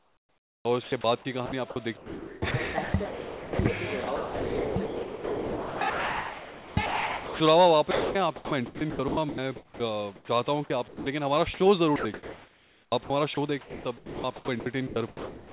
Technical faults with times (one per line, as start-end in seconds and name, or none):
0.00-0.92 comfort noise in place of the background
0.61-0.65 onset clipped by the voice detector
1.46-7.40 sound chopped by the voice detector
7.91-10.28 sound chopped by the voice detector
10.88-15.52 sound chopped by the voice detector